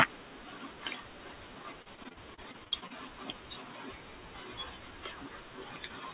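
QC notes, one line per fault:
1.82–2.92 s, repeated packet loss (robotic sound): choppy stretch with pieces dropping out. Thirteen short gaps, the longest 40 ms, were patched by stretching the preceding sound, so roughly a quarter of this span is filler over a band that stops at 4 kHz.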